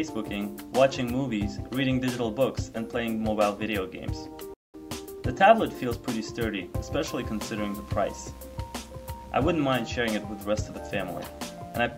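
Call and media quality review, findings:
Playback stall at 4.54 s to 4.74 s: audio halts mid-flow for about 200 ms, then resumes. Likely cause is the player starving for data or its output thread being blocked, leaving the device with nothing to render until it recovers. On a waveform, a flat silent gap with hard edges where the signal cuts off and restarts; on a spectrogram, a clean vertical band of silence across all frequencies, with no decay tail before it.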